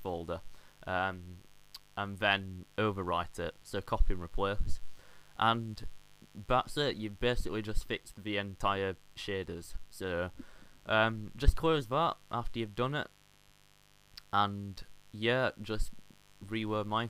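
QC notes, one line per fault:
throughout: mains buzz. A steady, raspy buzz sits under the sound for the whole clip, well below it at roughly 30 dB down. Sharp interference spikes arriving twice per 50 Hz mains cycle spread harmonics up into the kilohertz range, giving the rasp.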